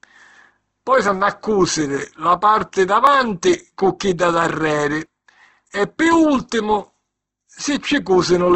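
Opus compression runs throughout this speech recording. The sound is rough and grainy, and nothing survives above 8.2 kHz. This fits a likely low-rate Opus encode near 12 kbps in its music mode, where starved bands are refilled with folded or noisy content instead of real detail. Audio missing between chunks occurs at 1.08, 3.07, 5.06 and 7.05 s. At each point a tiny sliver, around ten milliseconds, is skipped and the edges are butted together. The 2-second spacing likely points to a recorder dropping samples at each chunk boundary.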